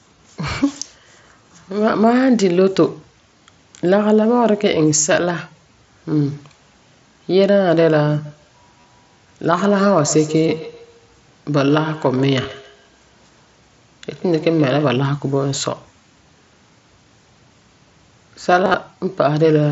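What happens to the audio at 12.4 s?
Concealed Bluetooth headset packet loss occurs at 12.43 s. About 15 ms of audio between the headset and phone went missing, which fits two lost frames. The receiver filled the gap by repeating the best-matching piece of the waveform just before it. Because the gap is so short, the patch is brief, with a small warble where real audio returns.

That moment also falls inside a feedback echo between two devices, which runs from 8.25 to 15.0 s. Two devices in the same room are on the call, and one plays back what the other's microphone captured. That microphone picks the sound up again, and neither device's echo canceller removes it. The sound returns roughly every 150 ms, thinner and more ringing with each pass. At its loudest it sits about 16 dB below the main speech.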